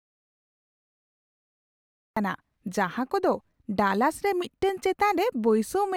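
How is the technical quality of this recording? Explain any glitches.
The recording has one clear glitch, right at the start. Audio dropout to silence runs from 0 s to about 2.17 s. The input was most likely lost through a disconnected device, failed link or stray mute, so silence was written. The clip opens in dead silence with no room tone, then the speech cuts in mid-flow.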